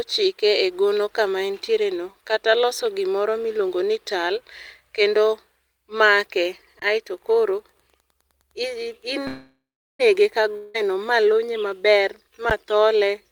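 Speech recording with four kinds of fault. Underrun with held sample at 6.79 to 6.82 s: the output briefly ran dry and the converter held its last value, so the waveform freezes flat for about 26 ms. Around 30 ms of audio is lost, unlike a freeze, which picks up where it stopped. A shorter one at 12.50 s holds for 10 ms and loses a similar sliver. Wi-Fi interference runs from 7.14 to 10.18 s: a nearby radio's beacon, rectified by the audio circuit, gives a faint ticking every 102.4 ms, about 50 dB below the speech. Its steady ten-per-second rhythm sets it apart from random crackle. A call audio freeze from 9.27 to 10.01 s stretches the last sound into a fading buzz, then about 0.39 s of silence, likely from delayed packets emptying the jitter buffer. Nothing is missing: speech resumes where it stopped, about 0.72 s late. A long network dropout at 10.57 to 10.76 s also fills with a fading buzz, about 0.17 s, likely from packets that never arrived. 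Unlike the freeze, the speech returns further on, with about 0.18 s skipped.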